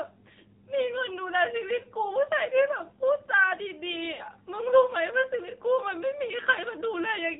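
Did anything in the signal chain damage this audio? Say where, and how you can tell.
Yes. Throughout the clip the speech sounds band-limited and buzzy, with nothing above 4 kHz and a plainly audible synthetic, metallic edge. This is the AMR narrowband mobile codec, damage introduced at the codec stage. AMR-NB runs at 8 kHz and rebuilds speech from a vocal-tract filter driven by sparse pulses. The coarseness here points to a low mode around 7.4 kbps, where that model audibly strains.

At about 4.14 to 4.24 s the speech briefly smears and dips, as if the last sound were held and faded rather than cut. Then it resumes thin and rough for a moment. This is lost AMR speech frames, a network-stage fault. Frames failed their checksum, so the decoder repeated its last good pitch and filter settings with falling gain. The disruption spans about 0.1 s, with three consecutive 20 ms frames lost, 60 ms of speech.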